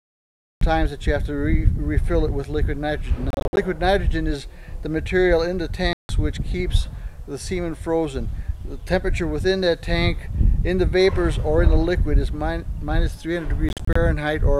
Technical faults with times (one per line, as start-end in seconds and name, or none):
0.00-0.61 cut-off start
3.30-3.57 Bluetooth dropout
5.93-6.09 Bluetooth dropout
13.69-13.96 Bluetooth dropout